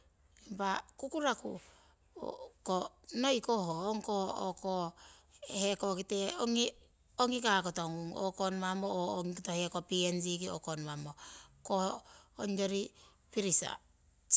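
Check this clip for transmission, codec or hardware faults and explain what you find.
No faults can be heard anywhere in this recording. Nothing in the speech points to a problem in the chain that carried it.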